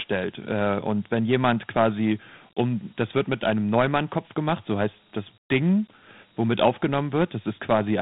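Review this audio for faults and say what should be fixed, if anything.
Dialogic VOX ADPCM runs through the whole clip. The speech sits in a telephone band of about 150 Hz to 3.7 kHz, with nothing above 3.9 kHz. Each sample is coded as a 4-bit step from a predicted value, which fits a rate of about 32 kbps. That coarse stepping leaves a plainly audible gritty hiss that rides on the speech and follows its level. Plain G.711 telephone audio has the same band limit but lacks this grit. Re-record or export from the original source in a linear PCM format rather than converting it to VOX ADPCM.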